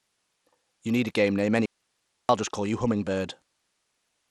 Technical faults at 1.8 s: Bluetooth SBC compression; audio dropout to a faint residue

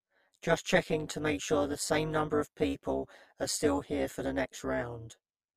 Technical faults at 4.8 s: channel delay (comb filtering); overlap-add ripple

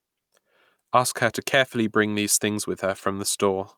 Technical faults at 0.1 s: none

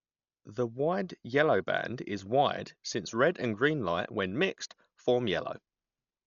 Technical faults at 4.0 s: Dolby Digital compression; channel delay (comb filtering)

